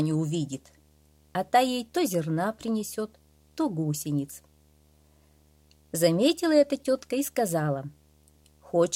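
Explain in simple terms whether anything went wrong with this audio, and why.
Video or display buzz runs through the whole clip, a faint but steady buzz at 75 Hz with a rough hiss above it. A nearby screen or its video cable is leaking its picture-refresh signal into the audio wiring, so that refresh rhythm becomes audible.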